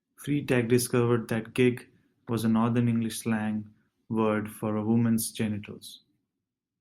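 No technical faults can be heard anywhere in the recording. The speech continues without any interruption or disturbance to the signal.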